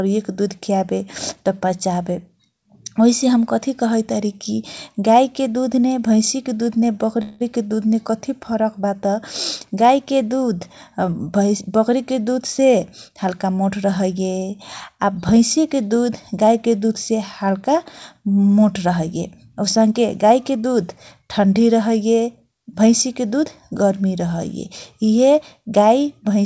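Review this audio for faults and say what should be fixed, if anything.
A call audio freeze at 7.22–7.42 s fills about 185 ms with a fading continuation of the last sound, likely from delayed packets draining the jitter buffer. Nothing is lost, only delayed.

Jitter buffer speed-up at 12.59–13.45 s (105%, roughly 50 ms removed) and 19.31–20.79 s (107%, about 100 ms) trims pitch periods, hurrying the speech without changing pitch.

The audio band stops at 8 kHz, consistent with G.722 wideband coding. Reducing network jitter and tuning the jitter buffer's target depth would prevent both the stall and the catch-up compression.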